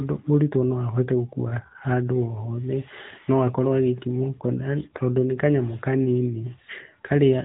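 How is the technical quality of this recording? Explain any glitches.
The speech sounds thin, boxed-in and buzzy for the whole clip, with a plainly audible synthetic edge and nothing above 3.8 kHz. That is the AMR narrowband mobile codec. It rebuilds the voice from a vocal-tract model fed by sparse pulses, and the damage points to a mid-range rate around 10.2 kbps.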